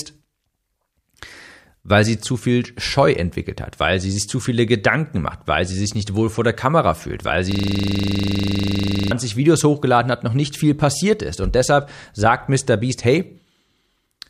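From 7.52 to 9.11 s, just after "fühlt weil", a system hang loop occurs. One 40 ms fragment repeats about 40 times, making a rough 25 Hz buzz.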